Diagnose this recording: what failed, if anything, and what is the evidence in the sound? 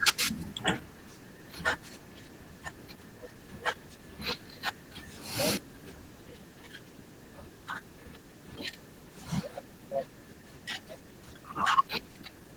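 The codec stage failed: Opus voice compression runs through the whole speech, which sounds plainly hoarse and slightly robotic. Unlike band-limiting, the spectrum stays open to about 20 kHz. The hybrid coder's coarse excitation points to a starved bitrate, around 16 kbps.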